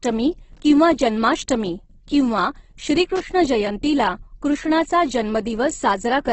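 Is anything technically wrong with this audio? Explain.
Yes. Two kinds of fault are audible in this speech clip.

Opus compression: Throughout, the speech sounds grainy and rough, with heavy codec damage and nothing above 8.2 kHz. The cause is likely Opus in its music (CELT) mode at a rate near 12 kbps. That mode keeps each band's energy but fills starved bands with folded or noise-like content.

Loose connector crackle: Two irregular bursts of crackle occur, from 0.53 to 0.60 s, just before "किंवा जन्माष्टमी किंवा", and from 3.16 to 3.23 s, just before "जयंतीला कृष्णाचा". A worn or dirty contact repeatedly makes and breaks, chopping the signal into brief scratchy fragments.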